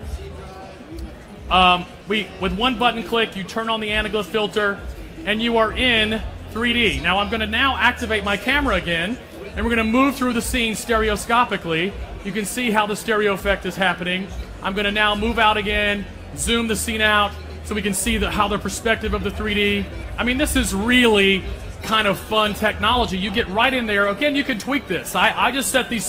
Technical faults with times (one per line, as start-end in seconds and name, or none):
21.79-26.09 adaptive stream at a lower bitrate